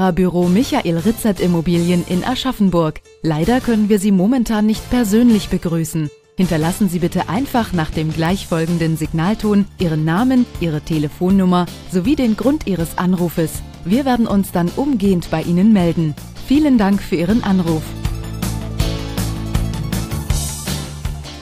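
At 8.25 s and again at 15.03 s a bit error spike appears: one sample flips to a wrong value, peaking at about -7 dBFS and then about -19 dBFS, and returns immediately. Each is heard as a single sharp, broadband tick unrelated to the surrounding sound.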